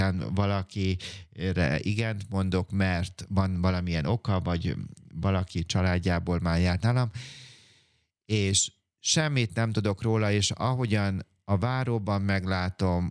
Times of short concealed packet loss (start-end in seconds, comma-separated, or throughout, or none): none